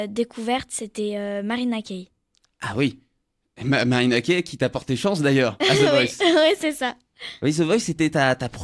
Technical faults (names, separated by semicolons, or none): none